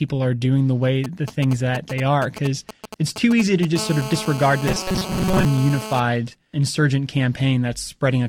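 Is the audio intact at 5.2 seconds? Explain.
No. A GSM phone buzz runs from 3.76 to 6.00 s: a nearby handset on a call pulses at 217 Hz, and the rectified bursts add a raspy buzz about 11 dB below the speech. On a spectrogram this shows as evenly spaced harmonic lines. From 4.68 to 5.45 s, robotic sound from repeated short buffers turns the speech into a rigid metallic drone at 188 Hz. This is likely caused by late buffers, with each short chunk of about 5.3 ms replayed while most of the real audio is skipped. The waveform shows identical repeating cycles, and the spectrogram shows a fixed comb of harmonics.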